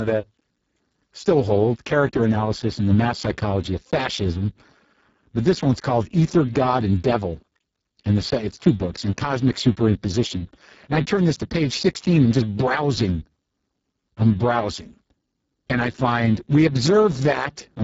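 It's a speech recording run through the Speex codec for its whole length, and the damage is heavy. The voice comes out hoarse, noisy and edging toward robotic, pointing to a very low bitrate around 6 kbps. Nothing survives above 7.7 kHz.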